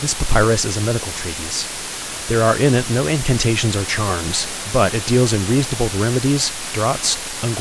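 Low bit depth with dither runs through the whole of this speech clip, from start to finish. The signal has been reduced to about 5 bits, with dither noise added before each sample was rounded. That turns the coarse rounding error into a steady, even hiss rather than gritty distortion. Because so few levels remain, the hiss is heavy, sitting roughly 10 dB below the speech. It stays constant under every part of the recording, including pauses.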